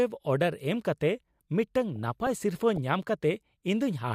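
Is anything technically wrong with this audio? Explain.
Yes, there is DAB burbling from 1.96 to 2.78 s. Under weak reception, residual bit errors on the order of 0.1 percent corrupt MP2 samples and scale factors, so individual sub-bands jump in level for up to a frame. The speech gets short, burbling blips of noise in single sub-bands.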